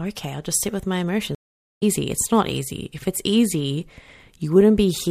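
A stream reconnect breaks this speech at 1.35 to 1.83 s, just after "just sit with my". The connection drops, leaving about 0.47 s of silence, then a restarted decoder resumes roughly half a second further along.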